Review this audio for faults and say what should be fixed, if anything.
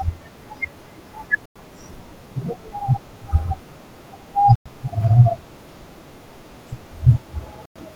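The speech stops dead for 100 ms at 1.46, 4.56 and 7.66 s, a gap between chunks that recurs every 3.1 s. The rhythm fits 3-second chunks with silence inserted at each join, so nothing is lost but the flow breaks abruptly. On a waveform each gap is a flat, near-silent line with hard vertical edges; a spectrogram shows a clean-edged blank column across all frequencies. Fix by trimming codec padding and scheduling chunks back-to-back.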